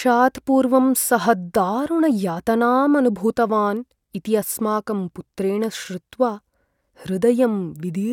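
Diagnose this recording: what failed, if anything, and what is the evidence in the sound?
Nothing failed in this recording, and the sound gives no evidence of a fault at any stage.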